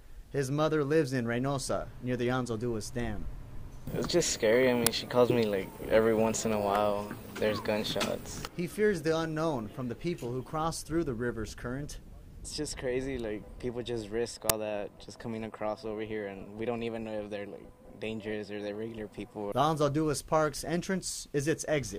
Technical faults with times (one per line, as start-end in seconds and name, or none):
4.86 uninitialised buffer
14.50 uninitialised buffer